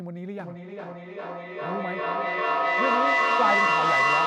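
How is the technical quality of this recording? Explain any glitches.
The recording has a real problem: a feedback echo between two devices runs from 0.39 s right to the end. Two devices on the same call are sharing a room, so one plays back what the other's mic sent, and that mic picks it up again. Each echo canceller only removes its own device's playback, so nothing breaks the loop. The speech comes back roughly every 400 ms, thinner and ringier each pass. The repeats build instead of fading, peaking at about 7 dB above the speech itself.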